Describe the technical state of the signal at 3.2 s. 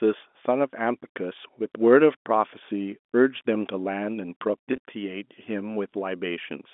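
At 3.2 s the speech is intact, with no fault to be heard, just the narrow telephone band of its G.711 coding.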